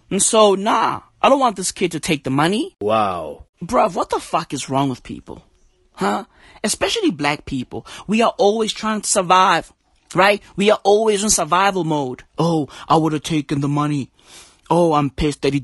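Speech passed through low-delay AAC compression, likely an AAC-ELD encoder of the kind used on video calls, and throughout the clip its damage is plainly audible. Its short frames cannot separate the voice's pitch harmonics cleanly, so the speech comes out rough and grainy, with noise filling the gaps between harmonics. That degree of coarseness fits a bitrate around 32 kbps, too little for this low-delay design to carry speech cleanly.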